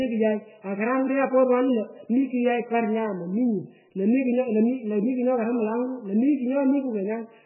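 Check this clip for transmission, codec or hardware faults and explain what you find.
One codec fault runs through the whole recording. The speech has been squeezed through what is most likely heavy MP3 compression, at a bitrate so low it points to something near 8 kbps. Starved of bits, the encoder throws away everything above 3 kHz and drops weaker frequency lines, letting them flicker on and off between frames. The result is dull, band-limited speech with a watery, swirling texture, metallic chirping on s sounds, and smeared consonant onsets.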